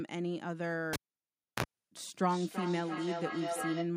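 A cable pulled and plugged in interrupts this speech clip from 0.93 to 1.64 s. A pop marks the break, and the signal drops to near silence for about 0.66 s while the connector is out. As it goes back in, a short 60 Hz mains buzz of about 41 ms comes through while only the tip makes contact, and a second pop follows as the full connection returns. Feedback echo between two devices starts at 1.97 s and runs to the end of the clip. Each phrase comes back at intervals of roughly 0.3 s, sounding thinner and more ringing with each pass, and the loudest repeats reach about 4 dB below the direct speech. This happens because two devices in the same room are on one call: one plays back what the other's microphone sent, that microphone picks it up again, and neither echo canceller removes sound coming from the other device's speaker.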